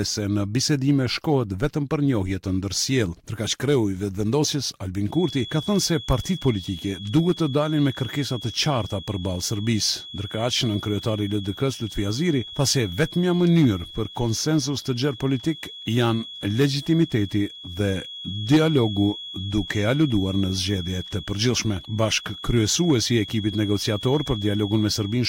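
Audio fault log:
5.06 s to the end: feedback whistle. A thin, steady tone at 3.4 kHz sits about 15 dB below the sound and swells and fades slowly in level. The likely cause is a loudspeaker-to-microphone loop held right at the edge of feedback, so one frequency rings on without running away.
9.13 s: corrupt frame decoded. A brief chirp, blip or burst of noise at around -35 dBFS, lasting roughly one compressed frame. Damaged bits in that frame were decoded anyway, so misread gains and codes placed energy at the wrong frequencies for that instant.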